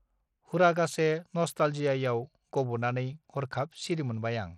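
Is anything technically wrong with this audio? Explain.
Yes. Throughout the speech, the signal has been squeezed through what is likely Bluetooth SBC compression at a low setting, consistent with roughly 80 kbps. Too few bits reach the upper sub-bands, so the treble thins and flickers while a gritty, aliased roughness rides on the sound.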